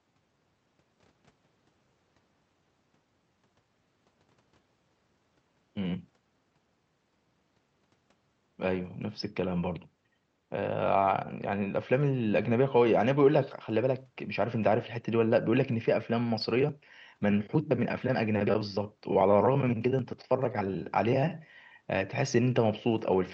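Nothing goes wrong anywhere in this speech clip; it came through an ordinary call path whose codec tops out around 8 kHz, which takes a little air off the top, and that's simply how that route sounds rather than anything broken.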